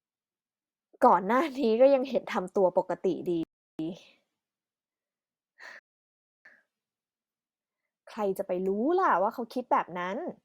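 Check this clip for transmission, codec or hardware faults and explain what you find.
Two rebuffering stalls interrupt the speech. At 3.43 s the audio drops to silence for about 0.36 s, and at 5.79 s for about 0.66 s. Each time, playback ran out of downloaded data and paused until more arrived, then resumed exactly where it stopped. Nothing is lost, but the gaps lengthen the clip.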